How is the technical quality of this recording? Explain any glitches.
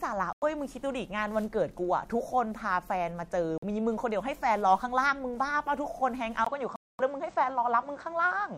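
The recording has three short gaps and a drop in quality near the end.

At 0.33 to 0.44 s, 3.58 to 3.64 s and 6.76 to 7.00 s the speech cuts to silence for about 93, 46 and 232 ms. In each hole the speech picks up further along rather than where it stopped. That points to a likely Bluetooth dropout: audio packets arrived too late for playback and were discarded, leaving silence until valid packets resumed.

From 6.45 s to the end, the input switched to a poorer device. A 20 ms silence marks the change. After it, nothing is present above 8.6 kHz, so the speech sounds duller and narrower. A new background noise floor sits roughly 40 dB below the speech, while the overall level stays about the same. The change in bandwidth and noise character is likely a switch to another microphone or a headset call profile.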